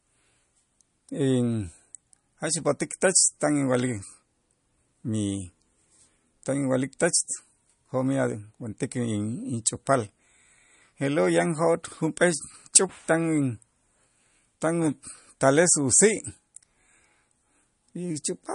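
Throughout the speech, the sound is watery and swirly, with chirpy sibilants and nothing above 10.6 kHz, likely from MP3 compression at a low bitrate, around 40 kbps. On a spectrogram the top ends in a flat shelf, with speckled, flickering holes below it.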